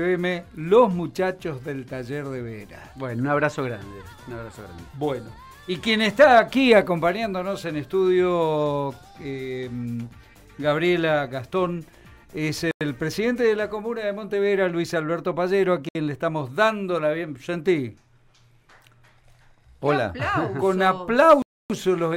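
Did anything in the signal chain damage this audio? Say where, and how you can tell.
Yes. The damage happened in playback over the wireless link, most likely a Bluetooth stall: interference delayed packets, the headphones' buffer ran empty, and output halted until retransmissions arrived. The sound drops to dead silence three times, from 12.71 to 12.81 s (97 ms), 15.89 to 15.95 s (64 ms), and 21.42 to 21.70 s (277 ms), each time resuming abruptly rather than fading. That is the signature of a starved buffer, not of anything in the source material.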